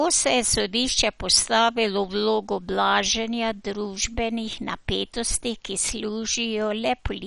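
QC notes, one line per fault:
Throughout, MP2 compression, most likely: the speech sounds dull and gurgly, with a grainy, watery edge that's plainly audible the whole way. Nothing comes through above about 11.3 kHz, since the encoder has cut off the top sub-bands entirely. The bands that remain get so few bits that they flicker in and out and are coarsely quantised, which causes that granular texture. The damage fits a low rate of around 48 kbps.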